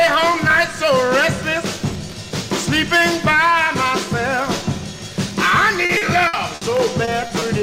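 From 5.85 s to 6.63 s there is repeated packet loss, giving a robotic sound. Four separate gaps fall inside this stretch, the longest about 60 ms, and together they account for about 200 ms, roughly a quarter of the span. Each time, the receiver bridges the hole by extending the last received sound, and the next dropout arrives before the audio can settle. The result is a choppy texture with pieces of the signal missing.

Three instances of short concealed packet loss follow, at 7.05–7.09 s, 7.27–7.31 s and 7.39–7.43 s, each with about 20 ms of audio that did not reach the decoder in time. The decoder continues the preceding sound across each hole and then blends back into the real signal. Each one is heard as a brief smear or wobble.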